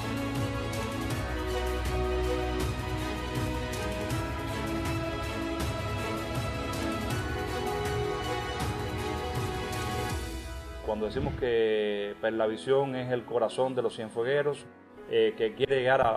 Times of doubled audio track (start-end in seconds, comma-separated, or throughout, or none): none